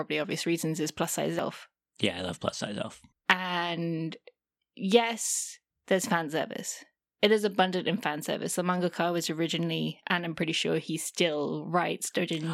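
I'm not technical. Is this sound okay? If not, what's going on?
No. At 1.39 to 1.42 seconds there is damaged data in a compressed stream: part of the stored file was corrupted, so the player misread it and produced a brief glitch in the speech.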